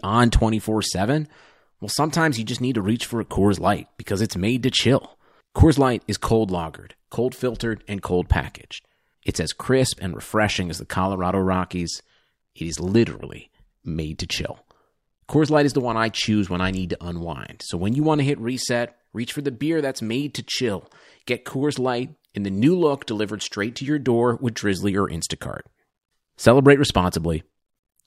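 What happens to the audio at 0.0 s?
Nothing goes wrong at 0.0 s; the audio is intact, with no dropout, click or distortion at that moment.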